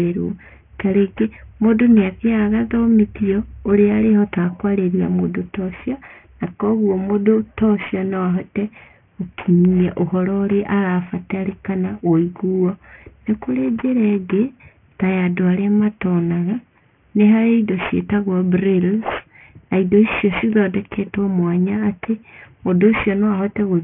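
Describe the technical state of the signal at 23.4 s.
At 23.4 s the speech carries aliasing, present throughout, which fits a drop to a 6 kHz rate without filtering. Sibilance folds back below 3 kHz as gritty, metallic tones roughly 20 dB down, and the spectrogram shows mirrored energy packed hard against 3 kHz.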